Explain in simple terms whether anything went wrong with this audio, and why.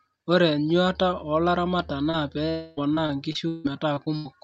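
Yes, several things went wrong, all from the network connection during this speech call.

Lost packet rebuilt from error correction, at 1.69, 1.89, 2.05 and 2.13 s, each lasting 20 ms. These bits of audio were lost in transit, but the next packet carried a rough backup copy. The receiver played that copy, so there's no gap, just a brief grainy, noisier moment each time.

Short concealed packet loss, from 2.11 to 2.15 s. About 20 ms never arrived in time, and the receiver covered the hole by stretching the sound just before it, then blending back in. It comes across as a tiny smear or wobble rather than a clean gap.

Long network dropout, from 2.49 to 2.79 s. For nearly 0.3 s the sound turns into an artificial, stretched buzz with no real speech underneath and no silence. This is likely a stretch where nothing arrived and the receiver kept inventing sound to fill it.

Repeated packet loss (robotic sound), from 2.77 to 4.27 s. 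Audio went missing seven separate times, the longest hole about 0.16 s, so roughly a quarter of this stretch is patched-in sound. The patches follow each other closely, making the speech choppy. Some of it was rebuilt from backup copies.

Throughout, the call codec also cuts everything above 8 kHz, which takes some crispness off the top of the sound.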